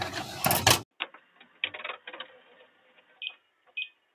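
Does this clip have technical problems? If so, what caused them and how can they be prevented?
Yes. A speech-tuned noise suppressor applied to music or sounds treats steady tones and tails as noise, so the level pumps by around 10 dB throughout. The sound is cut by the noise suppressor at 1.15–1.62 s, 2.4–3.21 s and 3.38–3.72 s, where held material sinks by about 7, 7 and 6 dB. To prevent this, disable noise suppression or switch it to a music mode for non-speech sources.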